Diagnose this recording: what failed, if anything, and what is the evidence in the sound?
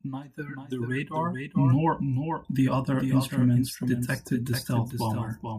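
A doubled audio track runs through the whole speech clip, most likely from the signal being captured twice with one path lagging. A second full-band copy trails the original by about 400 ms, roughly 5 dB quieter, with no decay or room colour, giving a flat, single echo.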